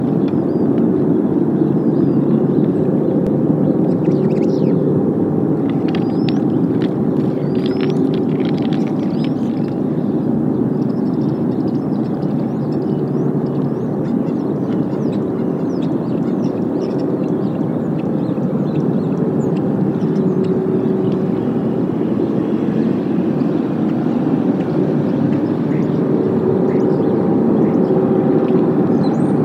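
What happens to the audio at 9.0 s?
Nothing goes wrong at 9.0 s; the audio plays through that moment intact, with no dropout, click or other fault.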